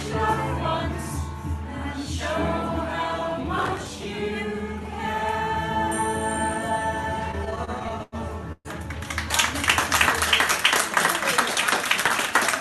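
The audio has come through a call path, with Opus-style coding and highs stopping near 12 kHz. Processor overload crackle appears at 3.58 to 3.89 s and again at 12.04 to 12.31 s. Both bursts are gritty and torn. The processor missed many short buffer deadlines in a row, which fits buffers of a few milliseconds. The first burst has dozens of misses, the second about twenty. Each missed buffer was skipped, leaving tiny hard-edged gaps. Repeated stalls (stutter) follow from 7.31 to 8.15 s. There are ten gaps, totalling 210 ms, and the longest is 94 ms. Packets kept arriving late, so the receiver stretched the last sound to cover about a quarter of that span. Nothing is lost, but the sound drags. A call audio freeze comes at 8.52 to 8.68 s. The sound holds as a fading continuation for 126 ms, and the last 40 ms go silent. It then resumes intact, likely after a packet delay emptied the jitter buffer.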